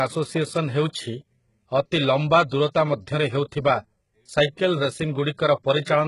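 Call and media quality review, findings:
Speech throughout. Gritty, metallic sibilants. No content above 11.1 kHz. Likely HE-AAC compression, heavily damaged. Treble is rebuilt from copied lower bands, which fits a bitrate near 12 kbps.

Pre-echo at 4.56–4.58 s and 5.37 s. Brief hiss just before attacks, and the onsets are smeared. Block quantisation noise spills into the quiet moment before each transient.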